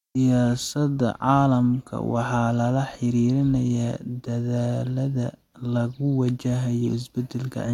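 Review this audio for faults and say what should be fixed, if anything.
No faults turn up in this audio, so nothing needs to be fixed.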